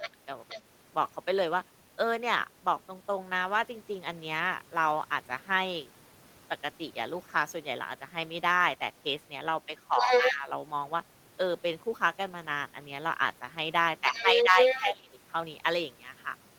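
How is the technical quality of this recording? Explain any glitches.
The recording has two kinds of fault, both from echo cancellation struggling while both ends of the call were active.

Speech suppressed in double talk appears at 0.0 to 0.13 s, 10.0 to 10.48 s and 14.09 to 15.14 s. When both sides spoke at once, the echo canceller likely could not tell the local talker apart from the loudspeaker echo, so it pulled everything down. The talker's speech dips by roughly 10 dB in the first two spots and by around 20 dB in the last.

The other side's voice leaking through occurs at 0.03 to 0.1 s, 0.48 to 0.61 s, 9.97 to 10.36 s and 14.08 to 14.81 s. The far end's voice, played from the loudspeaker, was likely not fully removed from the microphone signal. The two early traces sit well below the talker and are faint. Near 10 s and 14 s the leaked voice is about as loud as the talker or slightly louder, overlapping the suppressed speech so the two compete.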